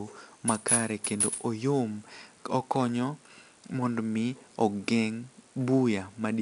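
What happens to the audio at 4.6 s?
At 4.6 s the speech is still under the 4-bit ADPCM compression heard throughout. Coarse 4-bit prediction steps leave a level-following gritty hiss and roughened consonant attacks, and with nothing above 10.6 kHz, which fits a sample rate near 22 kHz, the sound is dulled.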